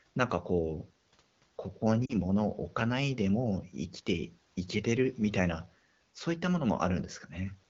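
Between 2.05 and 2.16 s, radio errors corrupted what sounds like two consecutive AMR speech frames, and the decoder bridged them by repeating the last good pitch and vocal tract settings at falling gain. The speech dips briefly toward near silence, then returns weak for a moment.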